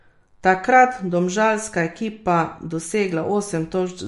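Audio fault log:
Throughout: MP3 compression, likely around 50 kbps. Treble stops dead at 11.3 kHz, and the speech sounds watery as weak frequency lines flicker frame to frame.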